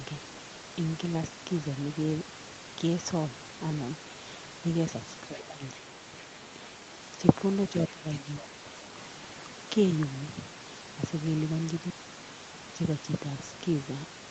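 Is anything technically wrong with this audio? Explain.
Yes. Between 5.28 and 5.61 s, and again from 7.91 to 8.64 s, the speech sinks, dropping by around 10 dB in the first stretch and nearer 15 dB in the second. This is speech suppressed in double talk. The likely cause is an echo canceller that, with both ends talking, couldn't separate this talker from loudspeaker echo and turned everything down.

Inside that second dip, from 8.38 to 8.44 s, a faint scrap of a different voice surfaces, roughly 20 dB below the speech. This is the other side's voice leaking through, likely residual loudspeaker echo that the canceller failed to remove from the microphone signal.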